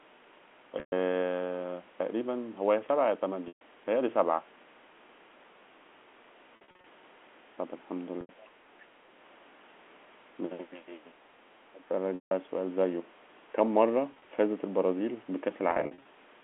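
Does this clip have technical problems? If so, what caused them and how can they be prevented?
Yes. Packets were dropped on the network, and the receiver covered each gap with packet loss with pitch repetition, looping the last pitch period and fading it out. This gives a brief held buzz or fade near 0.8, 3.48, 6.56, 8.21, 12.15, 14.12 and 15.71 s, each lasting 70 to 220 ms. Larger jitter buffers or forward error correction would prevent this.

At 11.18 s the level dips about 10 dB, and from 11.72 to 11.9 s it drops about 15 dB. This is likely speech suppressed in double talk, where the echo canceller attenuated the talker while the far side spoke. Better double-talk detection in the echo canceller would prevent this.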